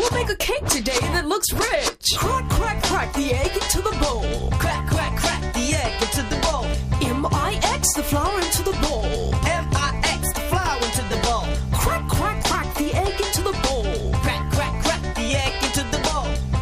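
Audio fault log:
No technical faults heard.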